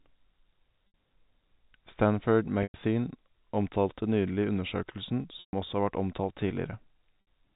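Packet loss with pitch repetition at 0.88, 2.63, 5.4 (after "omtalte nylig undersøkelsen") and 7.21 s drops 60 to 130 ms each; repeated pitch periods sound briefly buzzy and held.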